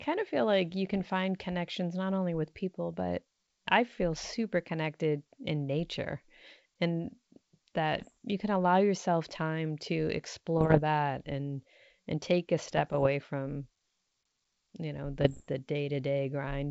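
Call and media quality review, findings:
Bit errors on ADPCM link: flipped bits corrupt decoder step size and predictor, ringing on briefly; pops, rough bursts, brief level jumps at 0.93–1.10 s, 8.00–8.07 s, 10.58–10.80 s, 12.66–13.07 s, 15.19–15.47 s.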